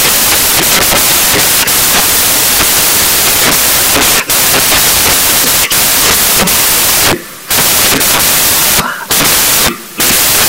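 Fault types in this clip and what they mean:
Samples built from the wrong bytes: the reader is assembling each sample from its bytes the wrong way, whether one byte off, in swapped order or with the wrong alignment. So the fast-flickering low bits end up as the big part of every value. It runs through the whole clip as loud, harsh broadband noise.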